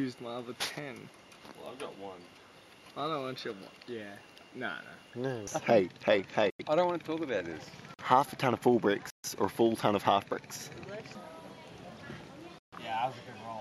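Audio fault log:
6.50 to 12.73 s, block of digital silence: short holes at 6.50 s (93 ms), 7.94 s (46 ms), 9.10 s (139 ms) and 12.59 s (139 ms), where the sound cuts out abruptly with no fade, consistent with output buffers of 4096 and 2048 samples not being filled in time.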